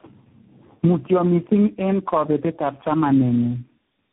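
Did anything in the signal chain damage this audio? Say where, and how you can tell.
Yes, at the codec stage, through the whole clip: tandem speech coding. The speech is rough, muffled and warbly, with nothing above 3.8 kHz, which fits about four speech codecs in series. Each decode and re-encode compounds the previous coder's distortion.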